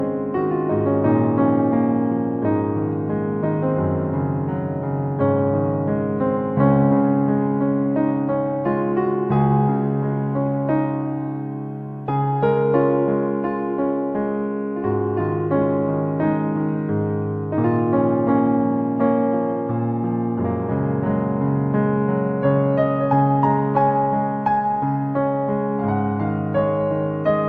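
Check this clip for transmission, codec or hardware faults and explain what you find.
No transmission, codec or hardware faults are audible anywhere in the clip.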